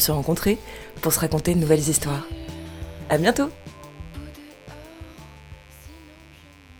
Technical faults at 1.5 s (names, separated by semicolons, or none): mains buzz